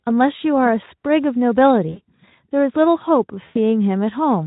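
At 1.89 s and 3.45 s, VoIP packet loss concealed by the speech codec: the Speex decoder covers gaps of 40 ms and 100 ms by repeating its last pitch and filter at falling gain. The speech smears into a brief, fading buzzy tone or coloured noise, longer and weaker the second time.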